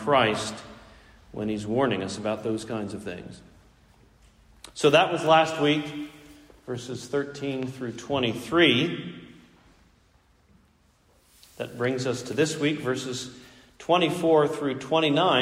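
A sudden voltage step, likely from a plug being moved, a switch or a static discharge, enters the signal path between 7.63 and 7.65 s and produces a single loud pop. The spike peaks a few decibels above the surrounding audio, and the circuitry after it shapes that step into a brief, sharp thump lasting about 20 ms. The pop sits on top of the recording while the sound underneath carries on uninterrupted.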